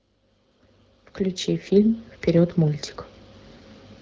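Nothing's technically wrong with this bit of speech; it comes through the AMR wideband (HD Voice) codec at 12.65 kbit/s, a rate where that codec holds up well, and there's no fault to point to anywhere in it.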